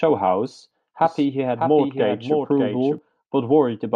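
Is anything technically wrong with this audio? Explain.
Yes, there is a doubled audio track from 1.04 to 2.98 s. A slower second capture path likely mixed in a dry copy, trailing roughly 0.7 s behind and a few dB quieter, cutting in and out abruptly.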